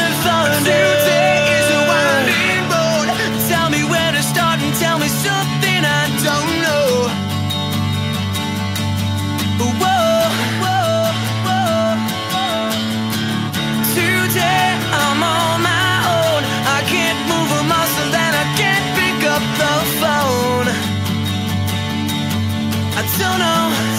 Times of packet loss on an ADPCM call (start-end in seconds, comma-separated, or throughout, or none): none